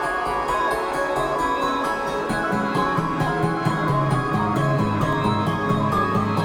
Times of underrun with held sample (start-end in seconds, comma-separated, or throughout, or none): 0.91, 5.13